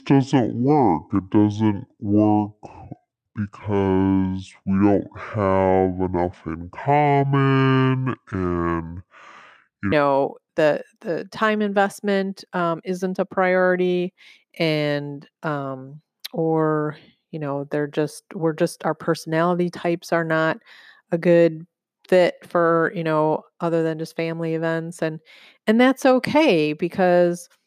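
Speech, with a section at the wrong speed from 0.00 to 9.92 s, ending just before "know the the time". That opening plays at 0.59 times its proper rate, so the voice is slowed and dragged down by roughly ten semitones, likely from being played or resampled against the wrong clock. Pitch and tempo drop together, which sets it apart from a pitch shift or time-stretch, where one would change without the other.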